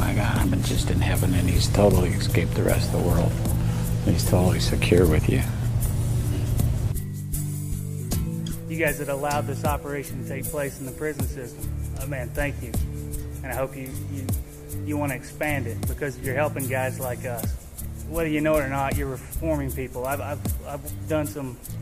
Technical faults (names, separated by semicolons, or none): none